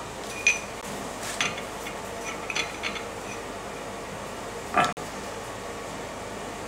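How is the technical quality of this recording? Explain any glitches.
Two brief gaps interrupt the recording. Bluetooth dropouts at 0.81 s and from 4.93 to 4.97 s: late wireless packets were likely discarded, leaving a silence of about 15 ms, then about 45 ms, before the sound resumes further along.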